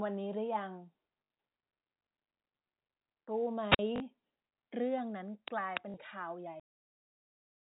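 At 1.24 s the speech breaks into a short robotic stutter lasting 60 ms, through 1.30 s. It buzzes at about 50 Hz. This is packet loss with the last packet repeated. Audio went missing in transit, and the receiver filled the gap by replaying the final packet it had. The buzz rate fits 20 ms packets, so roughly three were lost.

From 3.70 s to 3.79 s there is a wireless microphone squelch dropout. Hiss swells briefly, then the sound falls into a hole of near silence for about 46 ms before returning. The analogue FM radio link faded far enough that the receiver's squelch muted its output, and it opened again once the signal recovered.

The same packet-loss stutter returns twice more, each time for 40 ms, which suggests two lost packets. It runs from 3.96 s to 4.00 s and from 5.90 s to 5.94 s, and again carries the 50 Hz mechanical buzz of a replayed packet that doesn't line up with the pitch.

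At 6.60 s the speech stops dead mid-sound and drops straight to digital silence with no natural decay. The silence lasts until the clip ends. This is a cut-off end: the final buffers were never written or played out. The narrow telephone band of the G.711 coding can be heard throughout.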